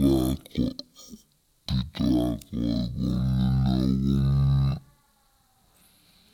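Speech here runs at half speed and an octave low throughout, the signature of stereo read as mono, where interleaved left-right samples were played back sequentially as one channel.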